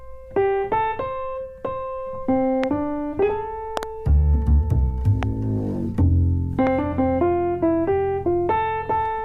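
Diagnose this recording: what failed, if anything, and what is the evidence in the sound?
Loud pops from the analogue wiring stage: single pops at 2.64–2.66, 5.23–5.25 and 6.67–6.69 s, and a double pop at 3.77–3.85 s. Each peaks around 15 dB above the sound, which continues beneath. Likely cause: voltage steps from a loose plug or static.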